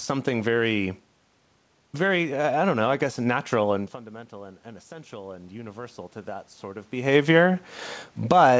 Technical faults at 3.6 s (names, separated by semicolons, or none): none